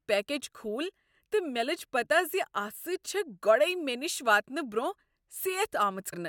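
A brief glitch cuts into the speech from 6.12 to 6.14 s, near the end. This is damaged data in a compressed stream: corrupted bytes made the decoder misread the frames there and lose sync while it searched for the next valid frame header.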